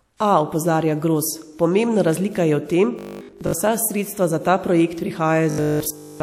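Audio data reaching the playback stage too seldom, with the software likely looping its last short buffer to fill the gaps, causes robotic sound from repeated short buffers from 2.99 to 3.53 s and again from 5.50 s to the end. About seven tenths of the sound in each span is replaced by repeats. The looping stamps a fixed 50 Hz buzz onto the speech, which fits a 20 ms buffer, and turns it metallic and rigid while still roughly tracking the words.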